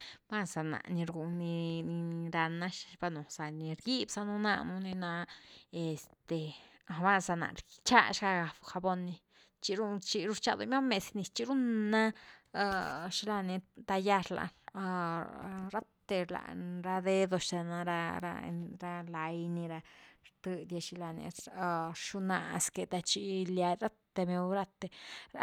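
Nothing in the recorded speech points to a technical fault at any point in the clip.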